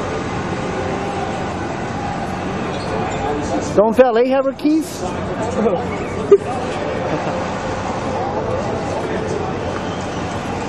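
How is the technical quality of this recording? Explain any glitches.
Nothing stood out on listening; no glitches could be heard anywhere in the recording.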